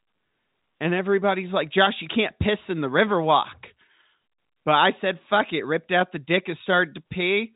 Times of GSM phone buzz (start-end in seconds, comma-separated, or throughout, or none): none